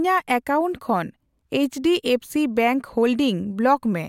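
No technical faults are audible.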